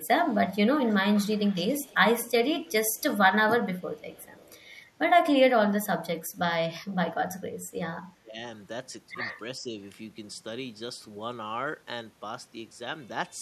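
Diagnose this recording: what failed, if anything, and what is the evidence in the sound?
Call processing failed. An echo leak appears at 0.25 to 2.31 s, 2.66 to 3.02 s and 3.79 to 4.61 s. A faint copy trails the speech by 362 ms. It sits about 25 dB down, then about 35 dB down. A far-end echo canceller likely sent loudspeaker pickup back.

The same stage also shows speech suppressed in double talk. From 8.12 to 8.38 s the speech drops sharply, by around 20 dB. From 9.59 to 9.77 s it dips only slightly. The canceller likely mistook overlapping talk for echo and turned both down.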